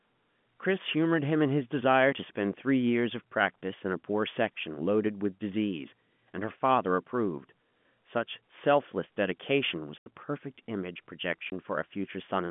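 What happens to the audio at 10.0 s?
From 9.98 to 10.06 s, packet loss filled with silence leaves an 80 ms hole, likely four lost 20 ms packets, with hard edges.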